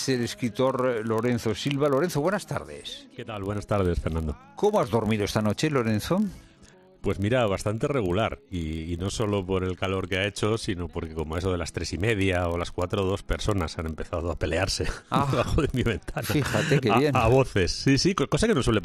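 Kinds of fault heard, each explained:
Filter restarted on every block: the filter discards its memory at each block boundary and starts again from silence, so every block opens with a brief transient. Throughout the clip this produces a steady buzz at about 43.1 Hz, which fits a 1024-sample block, rising and falling with the level of the sound. On a spectrogram it appears as evenly spaced thin vertical lines, and on the waveform as small regular glitches at each block start.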